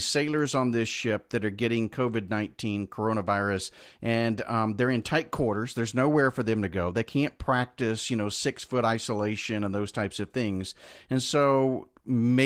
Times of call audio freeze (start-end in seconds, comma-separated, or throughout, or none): none